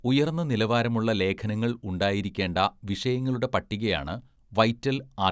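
Nothing stood out on listening to this speech recording.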